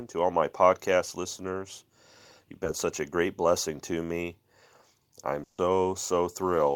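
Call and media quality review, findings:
Short concealed packet loss, 2.64–2.66 s, just before "such a great blessing". Brief smear/wobble. Jitter buffer or network drop; decoder concealment extended the preceding sound for about 10 ms, then blended back into the real audio.

Burst of packet loss, 5.43–5.59 s. Held buzz or fading hiss, then a jump ahead. Consecutive packets lost or late; concealment continued the last sound and faded it for about 150 ms, ending in a 10 ms silence before playback resumed further on.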